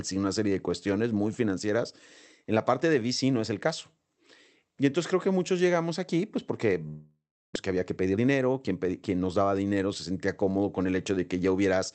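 At 6.87 s, right after "llegamos aquí pues porque", the sound trails off as a fading buzz or hiss, then goes quiet for about 330 ms before returning at 7.57 s with roughly 400 ms of material gone. This is likely a long network dropout, with the receiver concealing the gap until nothing was left to extend.

From 7.69 to 9.42 s, ending just before "dinero se sentía cómodo", a jitter buffer speed-up runs the audio about 15% fast at unchanged pitch. The buffer had built up roughly a third of a second of extra delay after the dropout, and the receiver drained it by trimming short pitch-period slices repeatedly, so this stretch sounds hurried. The Opus call path limits the band to 8 kHz throughout.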